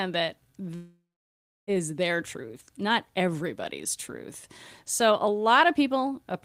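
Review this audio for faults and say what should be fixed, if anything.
A long network dropout likely cut off the incoming stream from 0.75 to 1.70 s, so about 0.92 s of speech never reached the receiver. The receiver filled the gap by carrying the last sound forward as a fading buzz, which then settles into roughly 0.66 s of silence. The speech resumes at "their truth not everybody's" with the missing stretch simply gone. To prevent it, use a steadier connection and a larger jitter buffer, or add packet redundancy or retransmission so short outages can be recovered.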